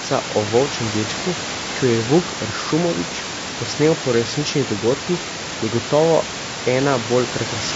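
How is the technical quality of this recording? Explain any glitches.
The speech is clearly degraded by codec damage throughout. The room noise sits about 11 dB below the speech and is part of the recording, not a fault.

Low-delay AAC compression runs through the whole clip. The damage is plainly audible and points to a low bitrate, around 32 kbps. Its likely cause is AAC-ELD, whose short frames blur the pitch harmonics. The voice sounds rough and grainy. On a spectrogram, noise fills the gaps between the harmonics and the top band looks thin or smeared.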